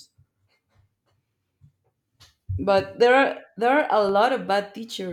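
A scratch on the disc left more data damaged than the player's error correction could rebuild, once per revolution, so the player concealed the gaps. In this speech clip that produces CD scratch ticks: three brief clicks, each under a millisecond, between 3.82 and 4.36 s.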